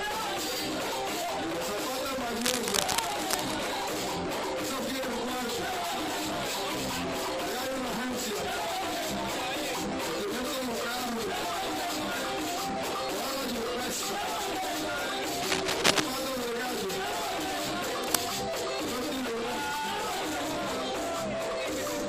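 Three bursts of cable scratch noise: 2.36 to 3.67 s, 15.36 to 16.06 s (a bit louder than the sound itself), and 18.04 to 18.27 s. Each is a dense, ragged rustle, likely from a worn connector or lead being moved and its contact flickering.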